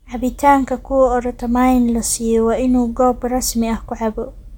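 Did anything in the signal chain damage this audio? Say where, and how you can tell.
No, nothing in this speech recording stood out on listening as damage from any stage of the signal chain.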